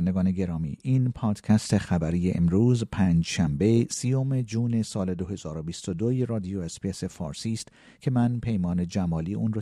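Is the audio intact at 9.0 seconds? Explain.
Yes, at 9.0 seconds the speech plays through cleanly, with no dropout, click, distortion or other fault at that point.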